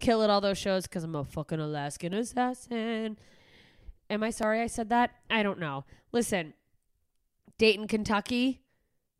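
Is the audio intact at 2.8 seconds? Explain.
No. Clock drift buffer slips run from 2.13 to 9.03 s, recurring every 2.3 s as regular clicks in the speech. The likely cause is two devices on separate clocks, off by a few hundred parts per million, so the buffer periodically drops or repeats a few tens of samples.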